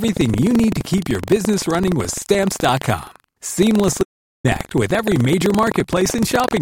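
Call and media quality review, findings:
Buffer tearing, whole clip: rattly robotic buzz at 23.4 Hz, present only under speech. Fits a 2048-sample buffer, writer and reader crossing each period, a small slice replaying audio about 150 ms old. Spectrogram: vertical seams every 43 ms.

Audio dropout to silence, 4.03–4.44 s: speech cuts out for 412 ms, resuming on "with every major". Likely input loss upstream, encoder writing zeros. Waveform: dead-flat line, no room tone. Spectrogram: fully blank column with hard edges.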